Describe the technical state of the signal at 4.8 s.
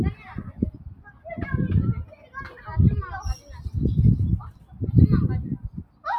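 At 4.8 s the signal sits inside a stretch of sound cut by the noise suppressor, running from 4.49 to 4.83 s. The processor judged this sound to be noise and turned it down harder than its surroundings. The level sinks by about 12 dB at its deepest, across roughly a third of a second. Any steady or decaying part dulls and shrinks, and its tail is clipped short. Only abrupt onsets keep their strength.

This dip comes from a broader fault: a noise suppressor applied to music or sounds. A gain stage tuned for speech is running on non-speech audio. It treats held tones, ambience and reverb as unwanted and pulls them down, with the gain swinging by somewhere around 20 dB. Transients pass while sustained material drops away. The result is pumping and fluttering, and the sound thins out as held parts fade under the suppressor.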